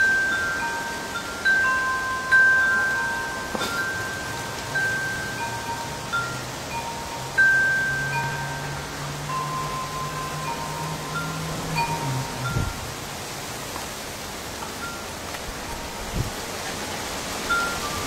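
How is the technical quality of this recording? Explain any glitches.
Four glitches stand out. Chunks out of order at 5.16–5.24 s, 8.24–8.36 s and 11.56–11.64 s: a 40 ms chunk plays one or two slots late, so nothing is lost. Its three hard joins give a jumbled moment. Compressed frames skipped at 16.62–16.69 s: roughly 40 ms of audio drops out, and the audio jumps forward.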